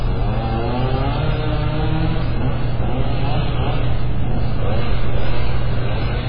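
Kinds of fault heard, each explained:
MP3 compression: The audio stops dead at about 5.1 kHz, with nothing above that line for the whole clip. The damage is heavy. Weak frequency detail flickers in and out between frames, so the sound turns watery and swirly, and sharp onsets smear. The encoder has cut the treble and dropped quiet components to save bits. This most likely comes from MP3 encoding at a very low bitrate, around 16 kbps.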